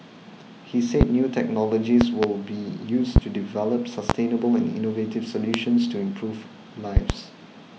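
Loud pops at 1.01–1.04 s, 2.01–2.26 s (a double pop), 3.16–3.20 s, 4.10–4.13 s, 5.54–5.58 s and 6.97–7.13 s (another double): sharp thumps roughly 20 to 25 dB above the speech, which continues underneath. They are likely electrical transients, such as switch or static spikes, added to the signal.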